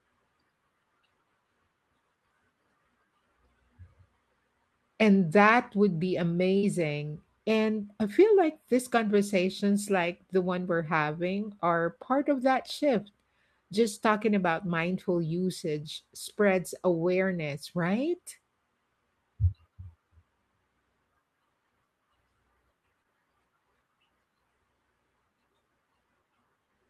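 At 6.57 s, just after "that would be", a burst of packet loss holds and fades the last sound for 50 ms, then resumes with 60 ms skipped.

At 23.02 s, short concealed packet loss gives only a 20 ms smear that blends straight back, far briefer, with no fading hold.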